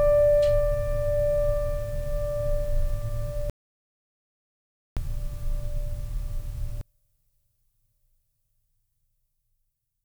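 A music clip with two faults. An audio dropout to silence runs from 3.50 to 4.97 s: about 1.47 s of dead silence with no background, likely from input loss while recording continued. From 6.81 s to the end, the sound nearly vanishes in mono, falling about 37 dB, leaving only a faint residue, likely one channel inverted cancelling the shared content.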